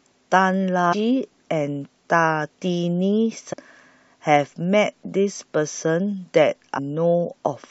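Damaged data in a compressed stream breaks into this speech clip three times, at 0.92 to 0.94 s, 3.52 to 3.54 s and 6.77 to 6.79 s, each a brief chirp or blip about 20 ms long. At each point the encoded bytes are corrupted, so the decoder cannot read the affected frame correctly, loses its place in the bitstream and scans forward for the next valid frame header, emitting a short burst of garbled sound.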